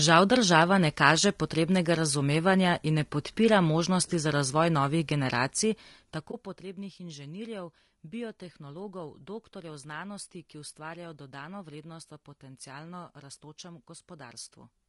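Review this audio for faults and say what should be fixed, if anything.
Throughout the speech the sound is rough and grainy, with noise filling the gaps between harmonics and a top band that sounds thin and synthetic. The codec damage is plainly audible and is likely caused by low-delay AAC compression (AAC-ELD). Its short frames resolve pitch harmonics poorly and spend bits inefficiently, and the degree of damage fits a bitrate around 32 kbps. Prevention: encode speech at a higher bitrate, or use a codec mode with longer frames where latency allows.

Zipper noise runs from 5.39 s to 6.71 s, between "možnosti za razvoj novih" and "inženirjev biotehnologov doktorjev znanosti". Instead of gliding, the level drops by about 20 dB in audible 1 dB steps, roughly fifteen per second. Each step is an unsmoothed jump in gain that leaves a small click, so a ticking texture rides on the speech for as long as the level moves. 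Prevention: interpolate gain per sample or with a short ramp rather than applying it once per buffer.

AAC frame loss with muting appears from 6.31 s to 6.34 s, inside the fade described above. For a moment the sound drops out as a brief dip of about 20 ms, which fits one lost frame whose spectrum the decoder set to zero. The overlapping windows fade the audio out and back in. Prevention: protect or retransmit frames on the transport path, or use decoder concealment that extrapolates the missing spectrum instead of muting it.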